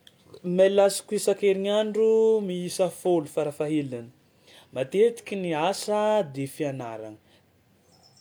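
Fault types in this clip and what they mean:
Nothing to flag here, as no technical faults turn up anywhere in this bit of speech.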